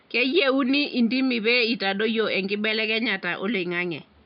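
Listening through this speech recording, nothing stood out, with only a faint room background sitting about 37 dB below the speech.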